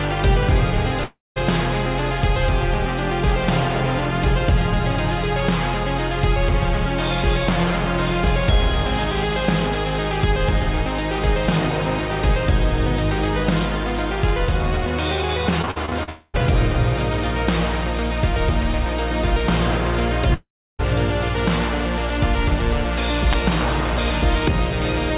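At 1.04 s the stream likely stopped arriving for a long network dropout, losing about 0.32 s. The receiver extends the last sound as a fading buzz, then about 0.18 s of silence follows before audio resumes at 1.38 s with the lost part gone.

From 15.62 to 16.09 s repeated packet loss sets in: six short gaps, the longest 46 ms, are each patched by stretching the previous sound, so about 37% of that span is filled in. The result is choppy, robotic sound with pieces missing.

It runs straight into a second long network dropout, likely from the connection stalling, from 16.09 to 16.36 s. About 0.24 s is lost, and concealment covers the whole gap with a smeared continuation rather than any silence.

A third long network dropout at 20.34 to 20.81 s likely comes from another stall, losing about 0.46 s. After a brief fading buzz there is roughly 0.33 s of silence before the audio returns.

At 23.33 s an uninitialised buffer is played: a 10 ms block goes out before real audio is written to it, so leftover memory becomes samples. 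It is heard as a sharp, loud crack. All of this sits inside the narrowband G.711 call path, which carries nothing above 4 kHz.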